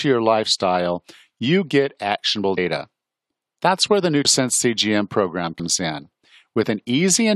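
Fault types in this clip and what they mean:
Compressed frames skipped: at 2.57 s (after "lifestyle you get actionable"), 4.24 s (after "where the") and 5.59 s, the speech jumps forward by about a tenth of a second. Each jump fits several whole 23.2 ms codec frames being dropped, either missing from the file or rejected by the decoder as damaged. Because adjacent frames overlap, each join comes out as a short smeared blip, not a sharp click.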